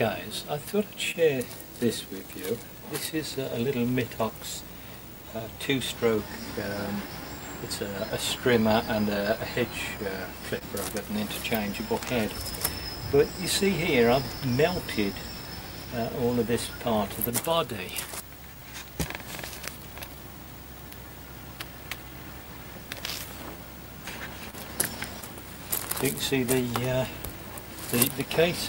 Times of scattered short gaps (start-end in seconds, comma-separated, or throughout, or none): 16.54-18.57